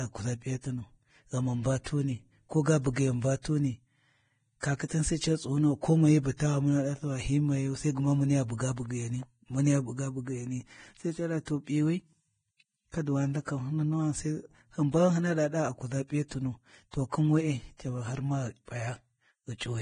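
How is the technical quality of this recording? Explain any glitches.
Technical quality is poor. The speech is heavily coded throughout, with one pre-echo.

Throughout the recording the sound is grainy and hissy, and the treble stops abruptly, with nothing above about 9.7 kHz. This is heavy codec damage, likely from Vorbis compression at a low rate, which fits a bitrate of around 23 kbps. At that setting the encoder lowers its cut-off and quantises the remaining upper band so coarsely that fine detail is replaced by noise of similar energy. Tones come out rough and attacks blurred.

From 4.60 to 4.63 s, just before "kakhitan sai", a pre-echo appears: a brief hiss of about 24 ms that runs ahead of the attack. A transform codec spreads quantisation noise across an entire block. Here the sharp onset landed late in a block, so noise scaled for the loud portion also filled the quiet gap before it. 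The onset sounds softened and smeared rather than crisp.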